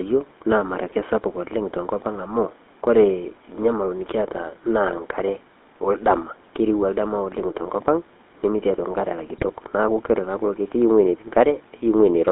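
Throughout, the speech carries the GSM full-rate codec's buzzy, gravelly roughness, band-limited to about 250 Hz to 3.7 kHz, which fits 13 kbps coding. The excitation is rebuilt from regularly spaced pulses, which gives a grainy texture. Plain narrowband telephone filtering would sound dull but smooth.

From 5.18 to 5.22 s, and again from 9.36 to 9.50 s, GSM bit errors break the speech into brief squawks and gargling. The later burst is longer and harsher. Corrupted filter, pitch or gain values distort whole frames rather than dropping them, so these bursts are garbled sound, not gaps of silence.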